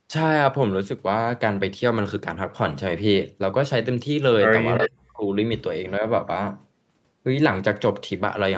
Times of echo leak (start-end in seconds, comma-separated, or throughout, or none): 4.81-4.89